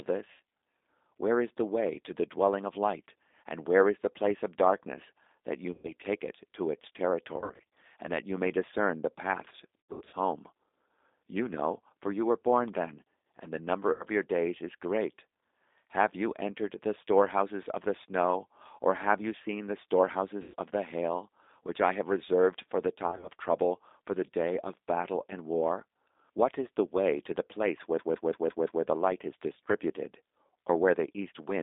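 Speech carried over a G.729 codec at 8 kbit/s, band-limited to about 300 Hz to 3.7 kHz and plainly rough and synthetic throughout. VoIP packet loss concealed by the speech codec leaves fading gaps at 0.32, 5.72, 7.40 to 7.77 (between "take it to its" and "and that you may"), 9.81 to 10.17, 13.92 (after "then and the number"), 20.42, and 23.07 to 23.28 s (after "have reserved for the"), as the decoder extrapolates lost frames. From 27.99 to 28.84 s a system hang loop repeats one 171 ms segment five times, a 5.9 Hz stutter that fits an 8192-sample ring buffer.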